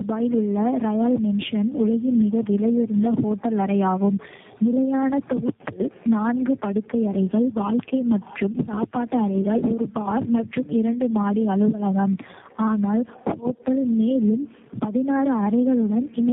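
From start to finish the speech shows tandem speech coding. It sounds like three speech coders in a row, likely CVSD, AMR-NB and G.729A, each re-coding the last one's damage. The result is rough, muffled and warbly, with nothing above 3.7 kHz.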